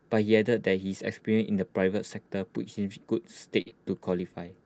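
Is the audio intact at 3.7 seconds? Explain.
No. A burst of packet loss runs from 3.61 to 3.70 s: consecutive packets failed to arrive in time, so the receiver stretched and faded the preceding sound for about 45 ms, lost roughly 40 ms of the original audio, then resumed with a short stretch of speech skipped.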